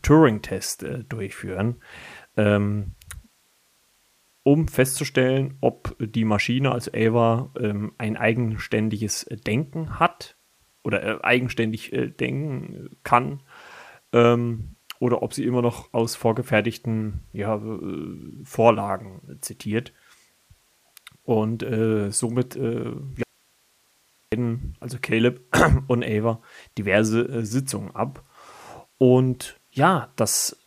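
Speech recording with an audio dropout to a faint residue from 23.23 to 24.32 s. About 1.09 s is lost, leaving only hiss roughly 40 dB down, likely a brief signal-path interruption.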